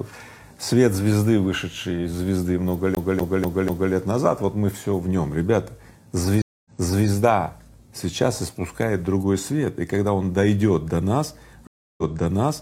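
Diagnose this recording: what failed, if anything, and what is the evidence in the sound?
The failure is at the storage and playback stage, a CD stuck on one turn. From 2.95 s to 3.93 s, a 245 ms slice of sound plays four times in a row. There is a brief mute at each jump. The even, rapid stutter points to a scratch. On every rotation the laser is knocked back one track at the same spot and rereads the same section.

The second fault is at the network stage, a stream reconnect, heard twice. At 6.42 s the sound drops out for 235 ms. It resumes 418 ms earlier than where it stopped, so that stretch repeats. At 11.67 s a 310 ms silence is followed by a jump back of about 0.98 s, and the fault runs to the end. Each time the connection broke, the player restarted its decoder mid-stream and the server resent a burst.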